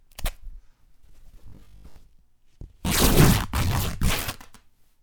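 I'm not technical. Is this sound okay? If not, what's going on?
No. There are two faults.

From about 1.48 to 1.96 s there is robotic sound from repeated short buffers. The likely cause is new audio arriving too slowly, so the player keeps replaying the last small scrap, about 20 ms, while most of the real sound in that half second is skipped. Those rapid repeats stamp a steady 50 Hz buzz onto everything, so the sound turns hard and metallic, like it's coming through a machine.

At about 4.25 to 4.32 s a corrupt frame decoded. A few of the compressed chunks the audio is stored in were damaged, yet the player played them anyway instead of discarding them. Because the damaged data put sound at the wrong pitches, you hear a brief chirp or blip of noise that doesn't belong to the original sound.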